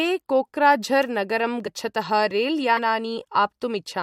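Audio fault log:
1.66 s and 2.77 s: compressed frames skipped. Each time the decoder dropped whole compressed frames, either missing or rejected as damaged, so the speech jumps ahead by around 40 ms.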